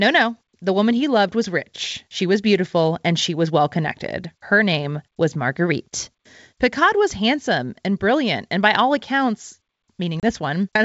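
A speech recording on a G.722 wideband call, with the clean upper band and light hiss that fit the 64 kbit/s mode, has one instance of packet loss on an ADPCM call from 10.20 to 10.23 s. About 30 ms, a few packets' worth, drops to hard-edged silence. Because the receiving decoder's adaptive predictor and step size no longer track the sender's, the speech comes back with brief distortion before settling.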